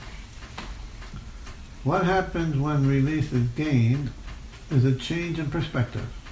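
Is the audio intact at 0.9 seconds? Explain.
Yes, at 0.9 s the audio is intact, with nothing there that points to a dropout, click, glitch or other fault.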